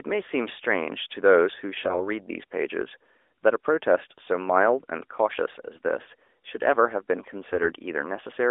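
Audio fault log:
1.80–2.01 s, AMR bit errors: for about a fifth of a second the speech turns hoarse and gargly while keeping roughly its pitch and loudness. A few percent of the weakly protected bits in a handful of narrowband AMR frames arrived flipped, so excitation pulses and fine spectral values decode wrong.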